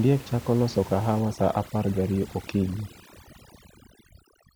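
From 1.2 s to the end, just after "chako loso", overdone noise removal takes hold. Bands near the room noise floor, about 20 dB under the speech, are pulled nearly to silence, leaving twinkling specks. Plain low-pass dullness would lack those specks.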